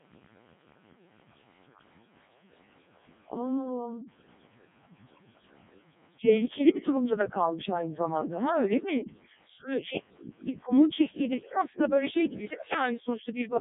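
Codec 2 vocoder damage runs through the whole speech clip, heavy enough to suggest its lowest 0.7 kbit/s mode. Only pitch, voicing, energy and a coarse envelope survive, resynthesised from sine waves, so the voice is robotic and buzzy, with nothing above 3.8 kHz.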